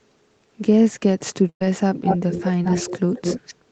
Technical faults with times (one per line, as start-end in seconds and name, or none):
1.49-1.62 burst of packet loss
2.62-2.65 short concealed packet loss